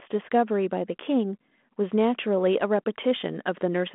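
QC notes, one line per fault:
No faults are heard in the speech. The G.726 ADPCM path at 32 kbit/s shows as a telephone band of roughly 200 Hz to 3.4 kHz with light coding grain.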